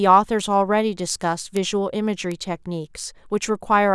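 A single flipped bit in single samples produces bit error spikes at 0.40 s, 1.57 s and 2.32 s, each a sharp broadband tick peaking about -20, -8 and -14 dBFS.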